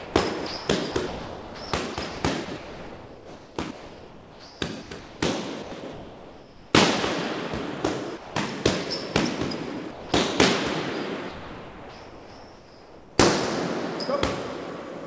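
From 0 to 0.14 s the sound gives way to steady synthetic noise: likely sound dropped by the voice detector, which treated the opening as background and sent comfort noise. Between 0.47 and 5.2 s, and again from 5.62 to 6.73 s, the audio turns choppy. This is likely sound chopped by the voice detector, repeatedly switching transmission off and on and filling about 3.3 s and 0.93 s with comfort noise. Brief gaps of steady noise at 8.17–8.35 s and 9.91–10.12 s are likely the same dropping, each swallowing roughly 0.2 s of sound. From 11.29 to 13.18 s the sound gives way to noise for nearly 1.9 s, with about 1.1 s of real sound lost, likely the detector again mistaking it for background. Throughout, nothing is heard above 8 kHz, consistent with a 64 kbps G.722 call path.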